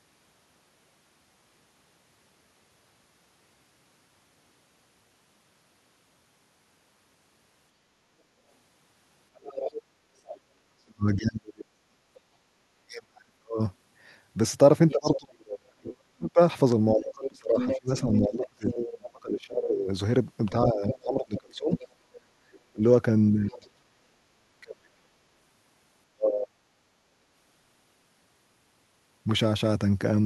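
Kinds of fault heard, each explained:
Other side's voice leaking through: a second voice comes through under the speech in four places, from 9.4 to 10.39 s, 14.9 to 15.17 s, 17.01 to 18.93 s and 20.88 to 23.67 s. It sits roughly 10 dB below the main talker in the first two, rising to only about 5 dB below at 17 s and falling to about 15 dB below in the last. The likely cause is far-end audio from a loudspeaker reaching the microphone and not being fully cancelled.
Speech suppressed in double talk: between 10.85 and 26.56 s the main talker's level repeatedly dips, for around seven seconds in total, at worst by roughly 40 dB, so parts of the speech nearly vanish. This likely comes from the echo canceller failing to tell its own talker from the returning echo while both sides spoke, and attenuating everything together.
Background gated by the echo canceller: at 22.31 to 22.45 s the room sound briefly falls away, by up to about 12 dB, for roughly 150 ms, then returns. 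It lands inside the longest stretch of leaked far-end audio, which fits the canceller clamping down on the microphone while the loudspeaker was active and releasing as soon as it judged the echo gone.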